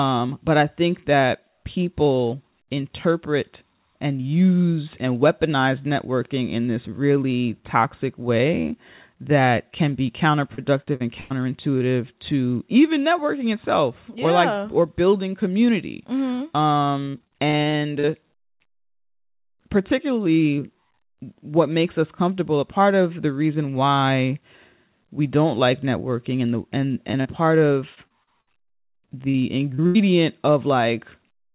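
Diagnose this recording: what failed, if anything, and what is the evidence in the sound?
Network-side repeated packet loss (robotic sound) hits at 10.54–11.32 s after "way that can be", 17.04–18.05 s and 27.95–29.37 s. Each stretch has four to twelve gaps patched by continuing the last sound, which makes it choppy and robotic.

Short concealed packet loss shows up at 11.78–11.82 s just before "to even networking itself", 27.11–27.15 s after "networking and the and", 27.21–27.27 s and 29.74–29.81 s. Each one is a 20–40 ms hole smeared over as a brief smear or wobble.

A burst of packet loss at 29.87–29.97 s drops about 80 ms in one go. The receiver continues the last sound and turns it down as the gap goes on, then jumps ahead. This all rides on a G.711 call path, so nothing is heard above 4 kHz.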